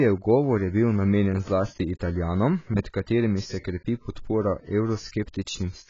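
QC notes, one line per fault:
Throughout, AAC compression: the speech was likely squeezed through an AAC-LC encoder starved of bits, with heavy damage that points to a bitrate near 16 kbps. To save data the encoder discards everything above about 7.6 kHz and quantises the remaining spectrum coarsely, so the sound comes out dull and band-limited, with sibilants smeared and a warbling, fizzy texture on sustained sounds where spectral detail was thrown away.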